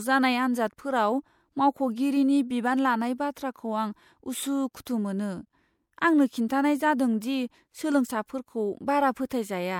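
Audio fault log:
4.73–4.75 s, 4.85 s, 7.21 s and 9.29 s, pre-echo: before four sharp speech onsets, a short hiss of 12 to 20 ms leads into each attack and dulls its edge. The transform codec spread its coarse quantisation noise across the whole block, so noise meant for the loud onset also filled the quiet gap before it. On a spectrogram, each appears as a thin broadband smear just before the transient. In the waveform, low-level fuzz precedes the attack.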